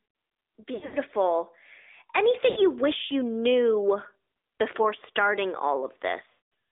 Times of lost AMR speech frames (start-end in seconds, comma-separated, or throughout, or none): 0.74-0.97, 2.50-2.67, 6.30-6.46